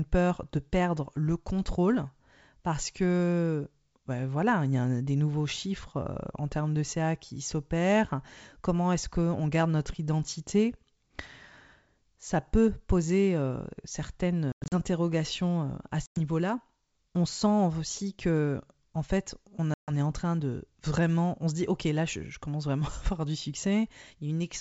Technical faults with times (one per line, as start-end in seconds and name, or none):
14.52-14.75 packet loss on an ADPCM call
16.06-16.18 packet loss on an ADPCM call
19.74-19.91 packet loss on an ADPCM call